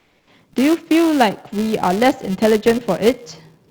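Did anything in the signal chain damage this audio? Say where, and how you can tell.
Yes. A 375 Hz buzz tracking the speech level runs throughout: a filter restarted on every block, forgetting its state, fitting a 128-sample buffer in the driver stage.

From 0 to 0.27 s the background is a steady, featureless hiss, about 1 dB quieter: likely comfort noise from Opus DTX in place of the background, a codec-stage substitution.

From 1.75 s to the end the speech turns dull and muffled, about 8 dB down at 10 kHz relative to 1 kHz: de-emphasis applied wrongly, an unneeded treble cut in processing.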